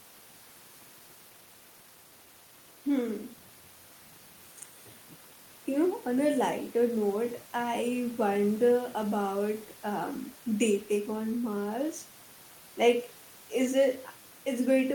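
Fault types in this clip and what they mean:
Skip ahead: At about 0.75 s the speech jumps forward with no gap. Roughly 0.7 s of audio is missing, dropped in transit or discarded from an overfull receive buffer, and the two sides of the cut are butted together almost seamlessly.
Jitter buffer speed-up: From 0.85 s to 2.99 s the receiver trims many short pitch-period segments to bring its queued audio back down to target, removing about 0.3 s in total. The speech plays at 115% speed with unchanged pitch and sounds hurried.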